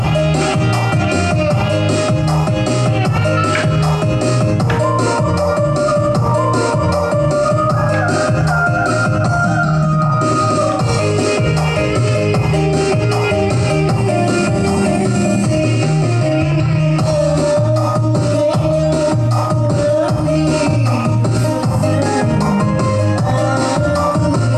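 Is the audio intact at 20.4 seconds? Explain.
Yes, the audio at 20.4 seconds is intact, with no dropout, click, distortion or other fault at that moment.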